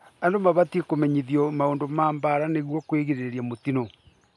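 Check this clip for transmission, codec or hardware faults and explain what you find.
Nothing stood out on listening to this speech recording; I heard nothing that points to a problem in how it was transmitted, encoded or captured.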